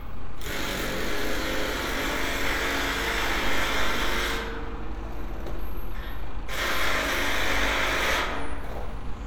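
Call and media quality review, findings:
No faults found: level, continuity and timing stay stable throughout the sound, with nothing pointing to a capture, transport or playback problem.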